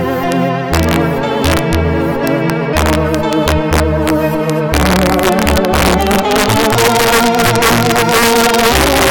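A music clip with integer overflow throughout: gain pushed peaks about 2 dB past the integer limit, and they wrapped to the opposite sign. Roughly 1.5% of samples flip, giving harsh cracks on loud passages.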